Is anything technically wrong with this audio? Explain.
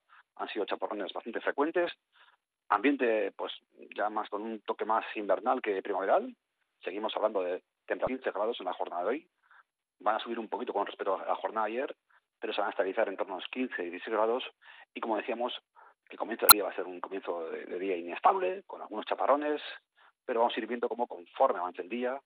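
Yes. The audio has three brief bursts of damaged data in a compressed stream: 1.86 to 1.89 s, 8.05 to 8.08 s, and 16.49 to 16.52 s. Each lasts about 35 ms. At these points, part of the encoded data was corrupted. The decoder could not read those frames properly and lost its place in the stream until it found the next valid frame. Each one is a short, harsh blip or squawk that breaks into the sound.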